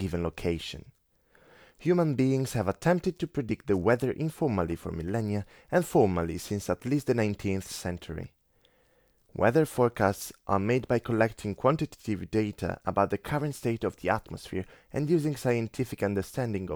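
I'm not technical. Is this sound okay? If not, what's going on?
Yes, no faults heard.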